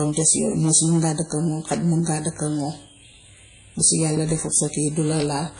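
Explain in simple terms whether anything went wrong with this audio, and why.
Hard clipping runs through the whole speech clip. The signal was driven far past what one stage could handle, so the loudest peaks were sliced flat, causing crackle tied to loud moments.

From start to end there is also a clearly audible washy, ringing quality, with hiss that rises and falls with the speech and nothing above about 10 kHz. WMA compression is the likely cause.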